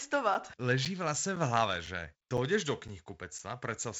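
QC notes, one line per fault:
0.34, 0.85, 1.36, 1.86, 2.37, 2.88 and 3.39 s, gap between chunks: the speech drops out for about 7 ms at each point, a tiny hard-edged hole that recurs every half second or so. The audio arrives in 0.5 s chunks with a short stretch of silence inserted at each join, so nothing is lost but the flow is briefly cut. The G.722 wideband path keeps the speech clear up to about 7.7 kHz.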